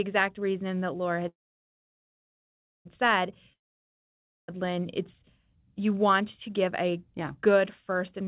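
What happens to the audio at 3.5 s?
A long network dropout runs from 3.53 to 4.50 s: audio likely stopped arriving, the gap is bridged with a fading buzz or hiss, then near-silence until sound resumes without the lost part.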